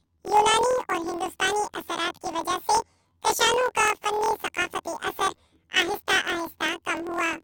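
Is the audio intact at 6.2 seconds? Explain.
No. At 6.2 seconds, as throughout, the speech sounds an octave high with a 41.7 Hz flutter: planar audio read as interleaved, each 24 ms block playing left then right at double speed.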